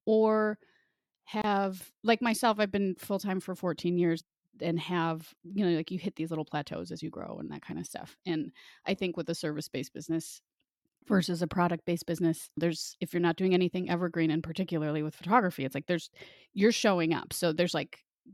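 At 1.42 to 1.44 s there's a gap at a join of encoded pieces: a gap of about 25 ms drops into the speech just before "like myself I've been". Two separately encoded chunks were butted together untrimmed, so encoder delay and last-frame padding survive as a short, smeared dropout before the speech picks up where it left off.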